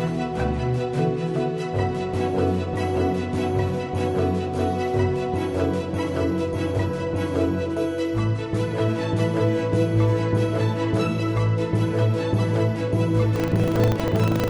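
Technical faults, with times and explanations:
13.32–14.50 s, buffer tearing: a steady 25 Hz rattle as each buffer splices in a small slice of audio from about 150 ms earlier; unlike dropouts, there are no silent gaps.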